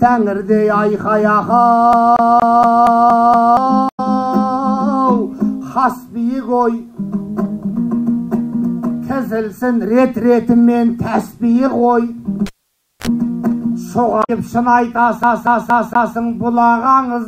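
From 1.93 to 3.57 s, the CD is stuck on one turn. A scratch throws the laser back. The same 0.23 s slice repeats seven times, each jump muted briefly. At 3.88 to 4.00 s, damaged data in the compressed stream makes the decoder lose sync. From 12.46 to 13.07 s, the cable is pulled and plugged in. A pop is followed by 0.56 s of near silence, then a 48 ms burst of 50 Hz buzz, then another pop. At 14.20 to 14.30 s, corrupted data causes another brief blip. From 15.23 to 16.17 s, the same 0.23 s loop stutters four times.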